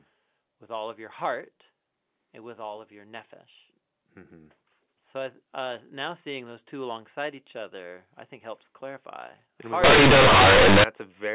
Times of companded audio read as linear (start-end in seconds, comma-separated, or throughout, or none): 9.84-10.84